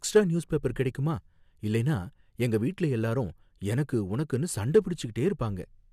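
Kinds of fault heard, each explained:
No technical faults can be heard in this speech recording.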